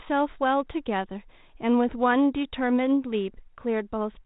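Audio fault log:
No faults heard.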